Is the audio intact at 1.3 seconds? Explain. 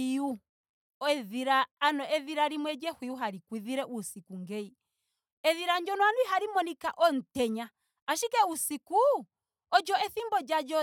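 Yes, the audio is intact at 1.3 seconds, with the speech running on without any dropout, click or distortion at that point.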